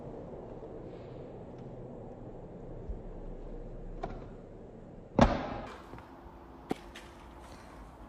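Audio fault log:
0.00–5.67 s: section at the wrong speed. The audio plays at 0.53 times its recorded speed. It sounds slow and deep, roughly ten semitones low. Speed and pitch drop together. It was likely played against the wrong clock. Normal speed returns at 5.67 s.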